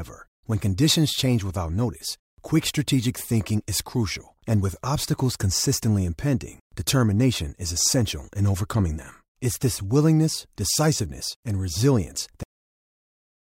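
At 12.43 s the speech is chopped off mid-sound: a cut-off end, where the final buffers never reached output. It snaps to flat digital silence, with no decay tail on the waveform or spectrogram.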